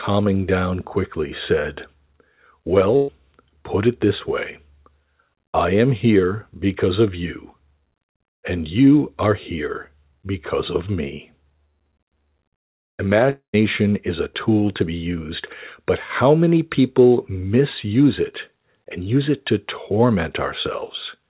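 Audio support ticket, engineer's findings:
Burst of packet loss, 2.96 to 3.10 s, just before "put it this way". About 120 ms of held, decaying sound from concealment. Jitter buffer extended the last frame, then resumed 120 ms later in the utterance. That audio is missing.

Long network dropout, 13.30 to 13.55 s, just before "is a tool to". About 230 ms of concealment fading out, then roughly 120 ms of silence. Likely cause: a transport stall. About 240 ms of audio is absent on resumption. Narrowband, nothing above 4 kHz, consistent with G.711 mu-law.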